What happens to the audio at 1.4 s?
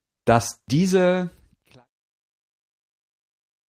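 At 1.4 s the audio is intact, just partway through a smooth fade-out that lowers the level gradually, with no click or hard edge.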